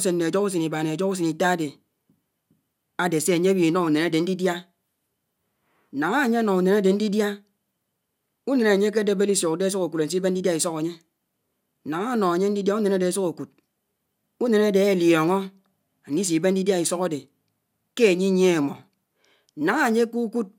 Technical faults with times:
none

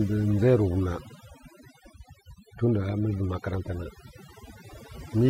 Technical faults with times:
0.00-5.29 overdone noise removal

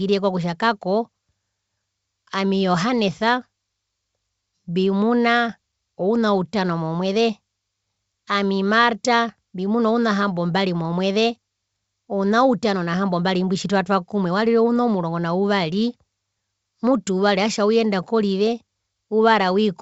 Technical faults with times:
none

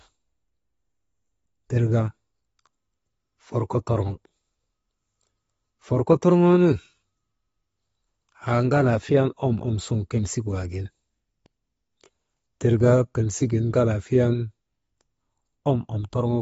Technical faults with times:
0.00-16.41 AAC compression

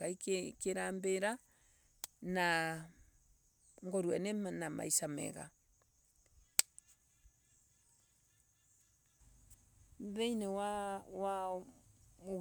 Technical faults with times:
none

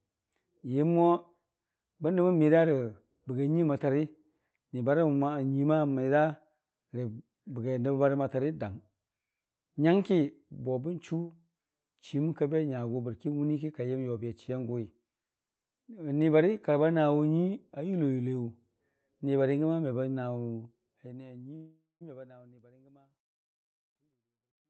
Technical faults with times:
21.55-22.03 call audio freeze

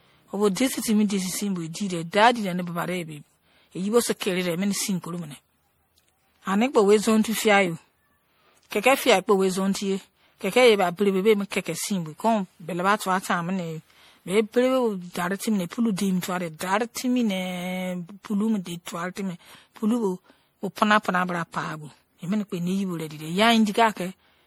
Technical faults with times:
0.00-24.46 generation loss

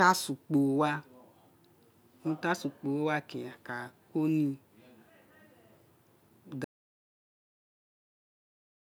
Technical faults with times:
6.64-8.91 audio dropout to silence

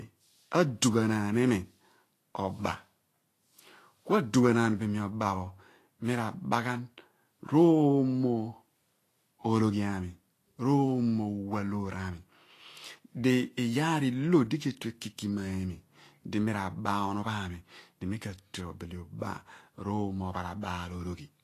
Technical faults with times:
0.00-21.44 Vorbis compression

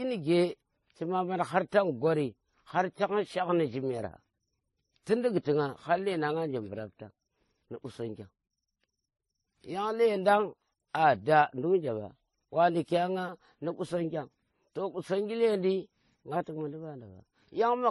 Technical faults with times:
0.00-17.91 transcoding between lossy codecs

